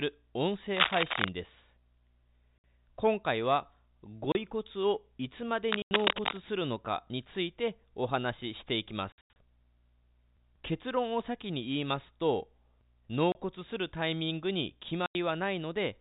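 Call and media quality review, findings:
Scratchy, rustling bursts over the speech at 0.75–1.28 s and 5.71–6.38 s, roughly as loud as the speech or slightly louder: cable scratch noise, likely a worn cable or connector whose contact resistance jumps as it moves.

Hard-edged silent gaps at 2.58 s (60 ms), 4.32 s (30 ms), 5.82 s (90 ms), 9.12–9.36 s (scattered, 180 ms total), 13.32 s (30 ms) and 15.06 s (90 ms): packet loss filled with silence, gaps fitting 30 ms packets.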